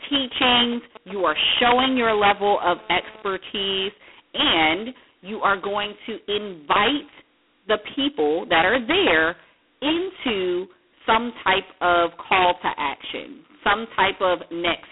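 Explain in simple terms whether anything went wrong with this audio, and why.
The speech sounds thin and boxed-in, like a phone call, with a harsh, rasping hiss riding on the voice from start to finish. The hiss swells when the speech gets louder and fades as it drops. This is G.726 ADPCM damage at its lowest quality setting. Instead of storing the sound itself, this phone-line coding stores the small difference between the sound and a guess of how it will change, using very few bits for each difference, and the errors become that gritty hiss. Nothing above about 3.8 kHz survives, which removes the crispness.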